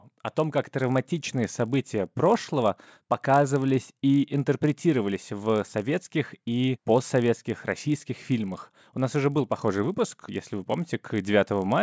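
A steady 50 Hz buzz runs under the speech throughout, sounding only while there is signal. It comes from a resampler restarted on every block: each 20 ms block was converted alone (which fits 44.1 kHz to 16 kHz), leaving a small error at every block edge.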